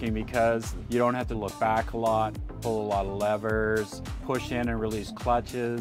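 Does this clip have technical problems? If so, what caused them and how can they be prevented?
No, nothing technical stands out in this one, so there's no cause to track down and nothing to guard against here.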